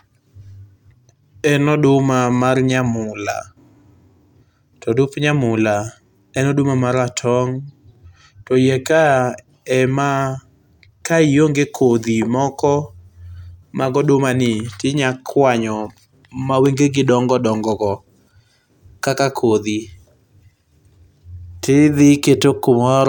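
No technical faults can be heard anywhere in the speech recording. There is nothing in it that calls for a time or a value to be noted.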